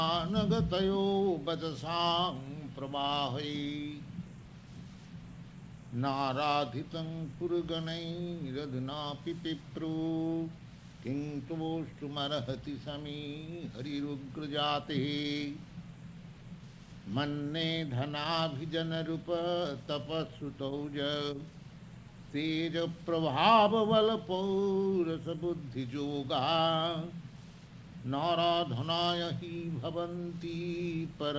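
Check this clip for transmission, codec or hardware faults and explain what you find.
I found no transmission, codec or hardware faults in this clip.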